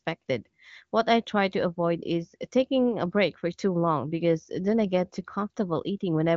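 Nothing goes wrong anywhere in this speech, which comes across as wideband HD Voice audio topping out around 7 kHz, with any coding damage faint enough to fit the AMR-WB codec running near its highest rate.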